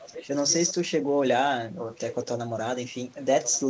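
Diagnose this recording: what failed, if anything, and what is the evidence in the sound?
Echo leak in call processing: a faint copy, 1.13 s late, at 0–0.73, 1.95–2.26 and 3.43–3.6 s, likely loudspeaker pickup the canceller missed; ghosted patterns on spectrograms.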